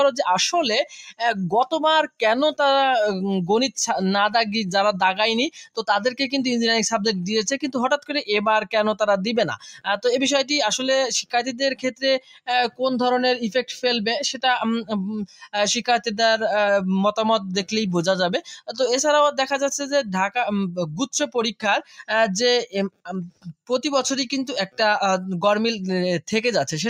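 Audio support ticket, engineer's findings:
Noise suppressor applied to music or sounds, whole clip. Level breathes by a few dB as held material and tails are read as noise and pulled down, attacks passing. Speech-tuned suppression left in the path. Audible pumping and thinning.

Sound cut by the noise suppressor at 0.85, 5.51, 9.58, 11.75, 12.2, 15.27, 21.82 and 23.3 s, each a fraction of a second. Steady portions sink by about 11 to 20 dB, deepest at 0.85 and 23.3 s. Suppressor gain clamping sustained content.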